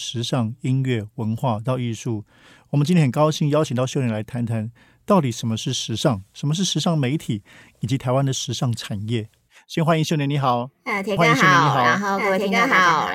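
At 11.17 s a doubled audio track begins and runs to the end. A second copy of the speech appears about one and a half seconds behind, at about the same loudness. It starts abruptly, with no echo tail or room colour. A slower second capture path is likely.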